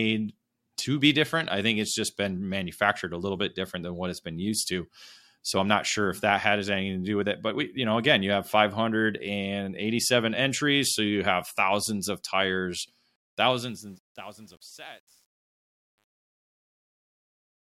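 A speech recording whose fade-out, starting at roughly 13 s after "have thousands of tires", has truncation distortion on a fade from 13.16 s to 17.75 s. The undithered gain stage, consistent with about 10 bits, leaves the tail gritty, worst from 13.72 s onward.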